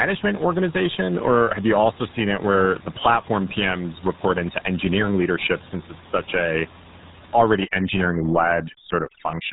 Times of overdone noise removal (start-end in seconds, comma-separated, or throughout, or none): 7.53-9.52